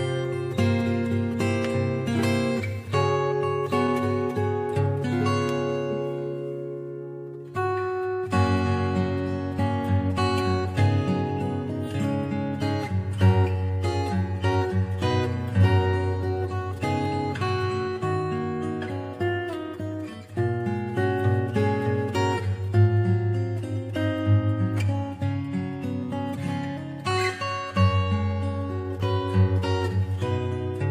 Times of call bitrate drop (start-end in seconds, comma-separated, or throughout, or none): none